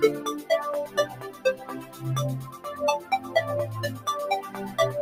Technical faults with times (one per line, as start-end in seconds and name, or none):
0.00-5.02 noise suppressor applied to music or sounds
0.87-2.03 sound cut by the noise suppressor
2.51-2.66 sound cut by the noise suppressor
2.99-3.33 sound cut by the noise suppressor